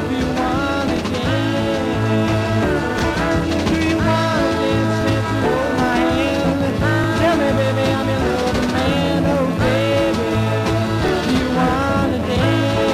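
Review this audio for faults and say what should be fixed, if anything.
Overlapping chunks produce a short stutter at 0.97, 2.99, 5.01, 7.04, 9.06 and 11.08 s. Each new 2.0 s chunk starts about 23 ms before the previous one ends, so that slice plays twice at every join. To prevent it, set chunk boundaries so each chunk begins exactly where the last ended, or trim the overlap before concatenation.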